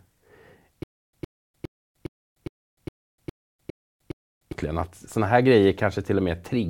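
A stutter with silent gaps runs from 0.83 to 4.52 s. The same 111 ms burst of speech plays nine times at a steady 410 ms period, with about 300 ms of dead digital silence after each one. The likely cause is playback or streaming running dry: on each retry the last fragment is replayed before the buffer empties again. The speech that belonged in those gaps never arrives, so the passage repeats instead of moving forward.

AAC frame loss with muting occurs at 3.70 s, inside the stutter. About 64 ms of sound drops out, which points to three missing frames. The decoder filled those frames with silence instead of spectral content, and its overlapping windows fade the signal down into the hole and back up out of it. The result is a soft-edged dip rather than a hard cut.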